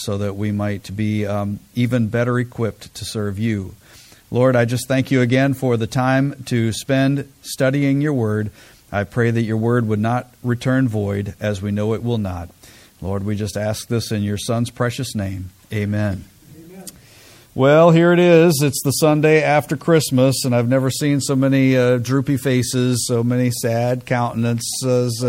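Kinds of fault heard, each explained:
MP3 compression: The encoder likely ran short of bits, so it zeroed weak frequency lines that flicker between frames. Throughout, this leaves a plainly audible watery, swirling texture and smeared attacks, fitting MP3 at about 64 kbps.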